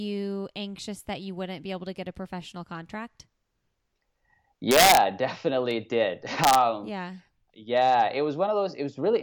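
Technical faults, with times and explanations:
4.71 to 4.97 s and 6.44 to 6.55 s, integer overflow: on loud peaks, just before "definitely did" and again about 1.5 s later, the signal was pushed roughly 2 dB and then 1 dB past the largest value the integer format can hold, and instead of being limited it wrapped to the opposite sign. Clipping would flatten the peaks into a buzzy distortion; here each overshoot jumps across the full range, giving violent, sharp cracks.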